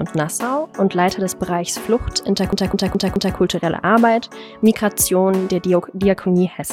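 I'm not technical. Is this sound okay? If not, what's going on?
No. From about 2.52 to 3.37 s, the audio gets stuck and stutters: the same short snippet, about 0.21 s long, plays four times in a row, with a tiny gap at each jump, before moving on. This is a CD stuck on one turn. A scratch on the disc keeps knocking the laser back to the same spot each time the disc spins, so that little piece repeats at a fast, steady rate until it breaks free.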